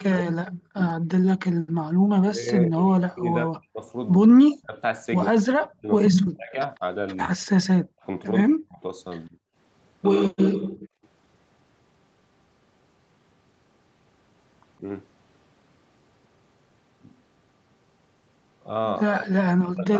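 From 0 to 1.24 s, 2.14 to 4.77 s, 5.31 to 9.37 s and 19.05 to 20.0 s, the talker's speech sinks by up to around 40 dB in broken pieces, likely speech suppressed in double talk as the echo canceller ducks both sides. At 1.6 to 1.76 s and 10.57 to 11.03 s, the background is gated by the echo canceller: only the room sound drops about 40 dB, briefly, rather than speech breaking up.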